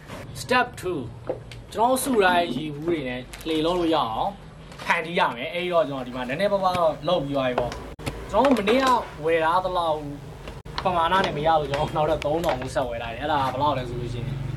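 At 7.93 s and again at 10.59 s, there is damaged data in a compressed stream. Each lasts about 70 ms. Corrupted bytes make the decoder misread those frames and lose sync while it hunts for the next frame header. Each break sounds like a brief chirp, squawk, click or short hole.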